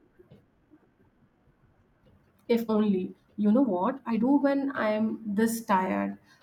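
Software likely squeezed the opening of the recording to fit a shorter length, playing it about 1.59 times faster while holding pitch by discarding short slices. This time-stretched section runs from 0.0 to 4.24 s, so the speech sounds rushed, then abruptly slows to a natural pace.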